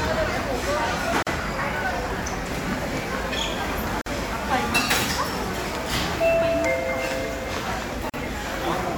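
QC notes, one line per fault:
1.23–1.27 s, 4.01–4.06 s and 8.10–8.14 s: gap at a join of encoded pieces. Sound drops out for 42, 48 and 42 ms, then resumes where it stopped. Separately encoded sections kept their start delay and end padding.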